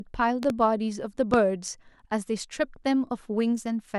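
At 0.43 to 0.52 s a loud pop arrives as two sharp clicks in quick succession, roughly 10 dB above the speech, which carries on uninterrupted beneath them. A second, single loud pop follows at 1.34 to 1.36 s, stronger at around 15 dB over the speech. Each is a brief voltage pulse added on top of the signal, most likely from a plug, switch or static discharge. Because the speech continues underneath, these are not dropouts or cut edits, where the sound itself would break.

From 3.52 s to the end the speech turns dull and gritty, the signature of a Bluetooth SBC bit pool drop. The sound points to the phone cutting the bit pool from 28 to 13, near 102 kbps, to survive a congested link. With so few bits the top sub-bands are starved and the rest coarsely quantised. A plain low-pass filter would only muffle the treble, but here a rough, grainy noise rides on the speech as well.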